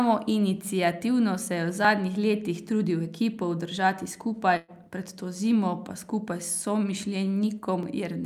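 At 1.85 s, between "se je v" and "letih trudil", the speech jumps forward with a tiny skip and no pause, a few milliseconds of sound simply gone. The same skip returns at 4.84 s, just before "pred to zimo pa", and at 7.83 s, spaced 3 s apart. That regular spacing points to audio missing between chunks: the recorder likely drops a sliver each time it closes one 3 s block and starts the next, then butts the edges together.

From 4.57 to 4.71 s, just before "pred to zimo pa", the sound stalls into a held, fading continuation of what came before, then picks up further along. This is a burst of packet loss. About 120 ms of audio never arrived in time, so the receiver covered roughly 114 ms by stretching and fading the last sound it had, with no silence in between, and skipped the missing stretch when fresh audio resumed.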